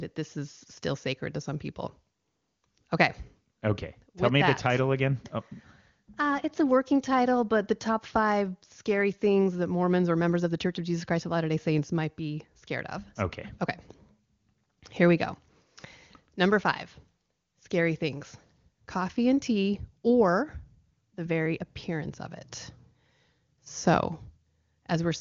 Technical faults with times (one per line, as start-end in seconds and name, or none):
none